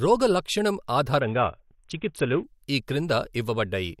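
From 1.2 s to 2.44 s the speech turns dull and muffled, its upper frequencies largely gone, while a gritty, granular noise rides underneath. The sound then returns to full brightness. This is a Bluetooth SBC bit pool drop. The link lost capacity, so the encoder cut its bit budget sharply, which fits a fall in bit pool from 28 to 5, around 54 kbps. That leaves the top sub-bands nearly empty and the rest crudely quantised.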